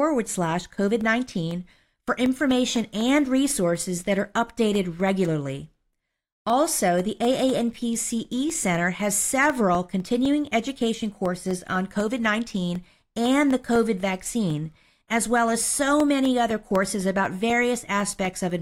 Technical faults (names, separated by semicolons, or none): periodic USB or driver dropouts